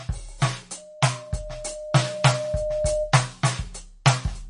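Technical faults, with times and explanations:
Throughout: MP3 compression. The music has nothing above 10.6 kHz, and the codec damage is plainly audible. With too few bits, the encoder drops weaker frequency lines that then flicker in and out between frames, giving a watery, swirling texture, while a fixed top-end cutoff removes the treble. The likely cause is MP3 encoding at a low bitrate, around 40 kbps. Unlike a plain low-pass filter, the band-limiting here comes with frame-to-frame warbling rather than a clean, static dullness.
0.77 to 3.19 s: loudspeaker feedback squeal. A single tone at 609 Hz swells over about two seconds until it sits at roughly the same level as the music, then stops at 3.19 s. A microphone was picking up its own loudspeaker, and at 609 Hz the loop gain exceeded one, so that frequency fed on itself and grew. The gradual build at one fixed pitch distinguishes it from a steady interfering hum or a test tone, which arrive at full level.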